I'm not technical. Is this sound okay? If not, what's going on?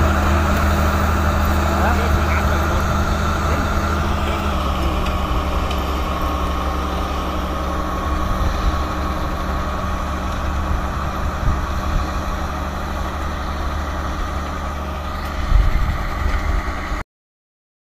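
No. From 4.52 s to the end, the sound becomes slightly slower and lower, about one and a half semitones down at roughly 92% speed. This is a wrong sample rate: it fits audio recorded at 48 kHz being played back at 44.1 kHz without conversion.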